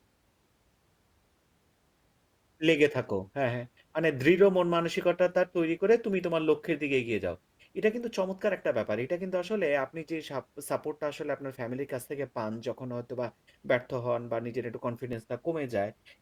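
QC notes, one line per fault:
15.13 s, repeated buffer: new audio did not reach the output in time, so the device played its last block of samples a second time. That block is only about 1.45 ms long, which fits a 64-sample buffer, so the doubled piece is too short to hear as a stutter. It comes across as a single brief click near the end of the speech, with a hard join where the repeat starts and a millisecond or two of audio lost.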